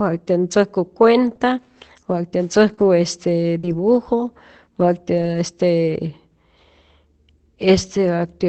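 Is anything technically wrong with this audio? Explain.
Yes. Between 1.23 and 5.35 s the speech shows scattered short gaps: about three brief losses, the longest around 40 ms, roughly 80 ms missing in all. The receiver papered over each hole by extending the preceding sound, stretching about 300 ms of concealment in total, so you hear small ticks, smears or hiccups rather than silence. That separates it from a single long dropout or from clipping clicks. The call codec's top end stops near 8 kHz throughout.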